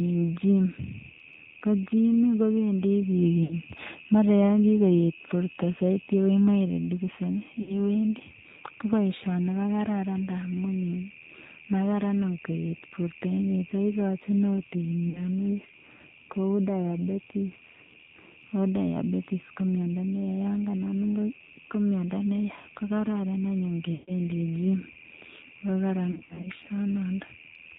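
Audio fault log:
throughout: AMR narrowband mobile codec. The speech is band-limited with nothing above 4 kHz and has a plainly buzzy, synthetic texture. That fits the low-rate AMR-NB mode near 7.4 kbps, where a pulse-driven vocal-tract model leaves little detail in each frame.
3.44–3.56, 7.62–7.79, 15.10–15.20, 23.94–24.12, 26.12–26.48 s: lost AMR speech frames. The decoder repeats the last good pitch and vocal-tract settings at falling gain, so the sound smears and warbles briefly. Gaps run 40–140 ms. The final stretch has scattered losses, each 60 ms at most.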